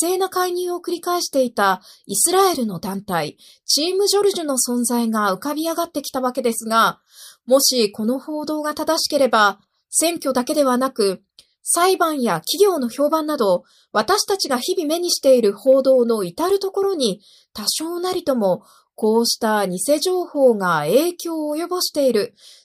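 No technical faults occur at any point in the speech.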